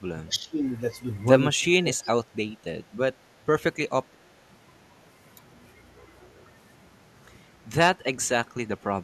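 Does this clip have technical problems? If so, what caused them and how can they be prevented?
Yes. Speech is suppressed in double talk at 0.09–0.6 s and 1.8–2.5 s, with drops of roughly 25 dB, and more lightly at 8.57–8.63 s and from 8.91 s to the end. The likely cause is an echo canceller mistaking the talker for loudspeaker echo during overlap and ducking both. Using a headset, or an echo canceller with better double-talk detection, prevents it.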